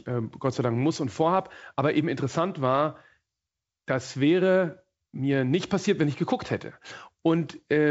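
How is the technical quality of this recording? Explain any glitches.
No glitches can be heard in the recording: the speech is carried by G.722 wideband telephone coding at 64 kbit/s, which keeps the band up to about 7 kHz, and nothing in the signal stands out as a technical problem.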